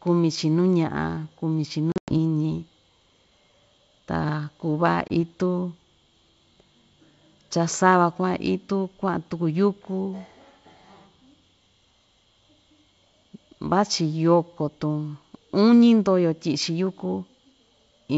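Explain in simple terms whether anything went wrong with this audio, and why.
Two moments of packet loss on an ADPCM call break up the speech. Between 1.92 and 2.14 s, several packets vanish, leaving hard-edged silent gaps, the longest about 100 ms. At 5.08 s one short packet drops. Unlike a simple dropout, the decoder loses track of its running prediction, so the sound comes back slightly distorted before settling within tens of milliseconds.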